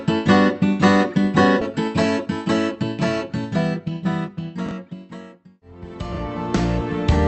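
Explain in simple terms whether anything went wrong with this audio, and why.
Around 1.61 to 1.74 s the audio suddenly jumps forward, as if a piece were cut out and the two ends glued together with almost no pause. This is a skip ahead: roughly a second of audio never got played. The call's receiving side either lost that stretch on the way or threw it away when its holding area for incoming audio overfilled, so playback leapt straight to the newer audio that was already waiting.

From 3.79 to 4.29 s the sound runs slightly hurried, about 6% faster, yet the pitch stays the same. That is a jitter buffer speed-up. After some delayed audio arrived in a bunch, the receiver held more than it wanted and trimmed many tiny slivers, about 40 ms in total, to catch up and shorten the delay.

Two brief jumbled moments occur at 4.66 to 4.71 s and 6.13 to 6.17 s. These are chunks out of order: in each spot a piece about 23 ms long arrived one piece late and played after the piece meant to follow it. 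Nothing is missing, but the swapped order leaves three abrupt joins each time, heard as a scrambled blip. All of this came through a call connection whose codec keeps sound only up to about 8 kHz.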